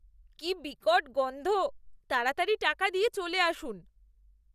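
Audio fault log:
No dropouts, distortion, noise bursts or timing disturbances can be heard anywhere in the speech, and the signal holds steady in level and continuity throughout.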